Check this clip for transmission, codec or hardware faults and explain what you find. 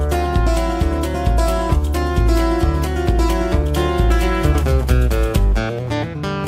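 No transmission, codec or hardware faults are audible anywhere in the clip.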